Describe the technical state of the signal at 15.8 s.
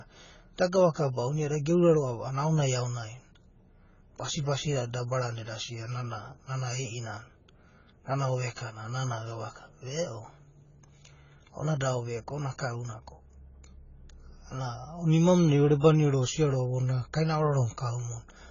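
At 15.80 to 15.83 s there is pre-echo. A short hiss runs about 28 ms ahead of a sharp attack. The codec spread its quantisation noise across the whole block, so noise sized for the loud onset fills the quiet gap before it. The attack sounds softened.

That sits on heavy damage that is likely AAC compression. Nothing is heard above 7 kHz. The sound is dull and smeared, with a watery, fizzy texture on sibilants. The damage fits a very low bitrate around 16 kbps.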